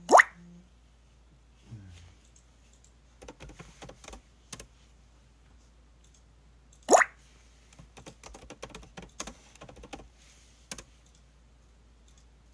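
No technical faults can be heard anywhere in this recording.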